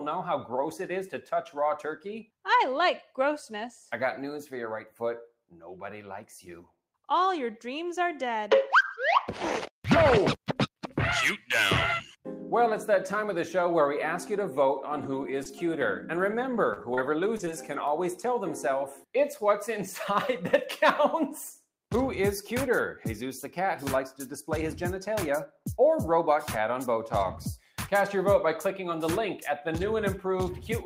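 Between 14.91 and 17.78 s the sound picks up a handful of brief ticks and small smears, about five of them, none longer than a few hundredths of a second. These are scattered short gaps: packets arrived lost or late, about 120 ms missing in all, and the receiver covered each hole by extending the preceding sound.

From 27.61 to 27.77 s the sound briefly dips, sinking by about 7 dB at its deepest. This is sound cut by the noise suppressor, which mistook this brief passage for background noise and pulled it down harder than the surrounding audio.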